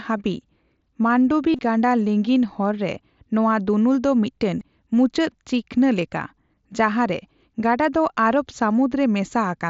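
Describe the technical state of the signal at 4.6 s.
Concealed Bluetooth headset packet loss at 4.59 s: about 15 ms, consistent with two lost packets, was filled by repeating the closest-matching recent waveform, leaving a brief buzzy patch.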